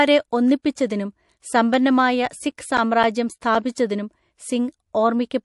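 MP3 compression runs through the whole speech clip, with plainly audible damage: a watery, swirly texture and dulled treble, as the encoder drops weak frequency lines and caps the top end. The cause is likely a starved MP3 encode, which fits a bitrate near 48 kbps.

Pre-echo appears at 0.62 to 0.65 s as a hiss about 22 ms ahead of a sharp attack, roughly 13 dB above the quiet before it. The codec spread noise across a long block, pointing to a 48 ms window without switching to short blocks.

CD scratch ticks follow from 1.74 to 4.07 s: ten regular clicks, about four a second, the longest around a hundredth of a second. On each disc turn, a blemish wiped out more data than error correction could restore, so the player patched or muted those samples.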